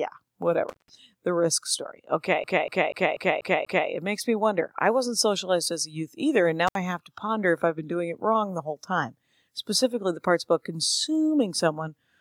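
Speech that twice drops out abruptly with crackle at the edges and faint hiss in the gap, from about 0.69 to 0.90 s (open for about 160 ms) and from 6.67 to 6.76 s (about 67 ms). That is intermittent contact, a loose cable or plug briefly breaking the signal path. Between 2.44 and 3.89 s the audio stutters in a fast, even loop, repeating the same 0.24 s fragment six times with a brief mute at each jump. That is a CD stuck on one turn, where a scratch knocks the laser back one track at the same spot on every rotation.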